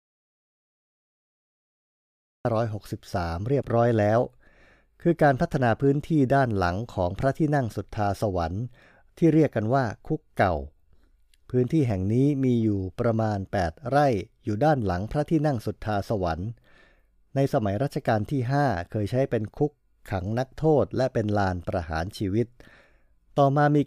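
From the very start until about 2.45 s, an audio dropout to silence occurs: the input was likely lost, perhaps through a disconnected device or failed link, while recording continued writing silence. The speech enters only at 2.45 s, preceded by dead silence without room tone.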